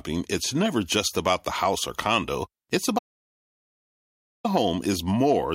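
At 2.99 s the speech cuts out abruptly and the track goes to dead silence until 4.45 s, about 1.46 s, with not even room tone underneath, then the speech snaps back in mid-flow. That's an audio dropout to silence: the input most likely vanished for a moment, say a loose device or a brief mute, while the recorder kept writing silence. Whatever was said in that stretch is simply gone.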